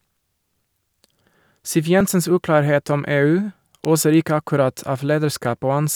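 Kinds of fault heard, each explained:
Dropped buffer (overrun): A small jump in the speech is heard at 2.01 s, just before "uklarhet om". There is no gap of silence. The likely cause is that the program fell behind and a stretch of a few milliseconds was overwritten, so the two sides join directly.
Electrical switching spike: A sharp snap or tight cluster of clicks sits on top of the speech at 3.85 s, just before "oser ikke akkurat". The speech itself carries on unbroken underneath. This points to a likely short electrical arc from a nearby switch or discharge being picked up by the audio line.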